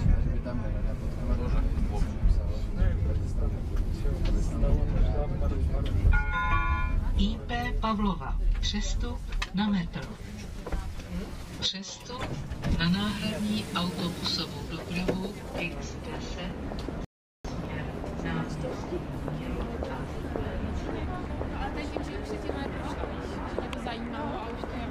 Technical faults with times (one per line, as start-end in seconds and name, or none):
17.05-17.45 rebuffering stall